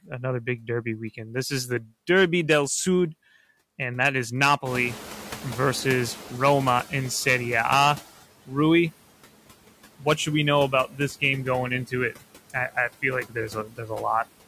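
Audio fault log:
throughout: noise suppressor artifacts. The suppressor pulls steady background down by about 16 dB, frame by frame. The leftover noise dips between phrases.
0.03–0.12, 0.41–1.35, 1.51–2.08, 8.46–8.55, 10.91–11.0, 13.24–13.91 s: speech cut by the noise suppressor. Quiet speech is mistaken for noise and dropped by about 10 to 17 dB, so it sounds swallowed. The 10.91 s cut falls between "should we know" and "game going", and the 13.24 s cut follows "it I I feel".
4.65–8.04 s: noise suppressor catching up. After "and that is", the room noise jumps about 20 dB near 4.5 s. The lagging estimate lets it through, then cuts it by about 12 dB over 3.4 s.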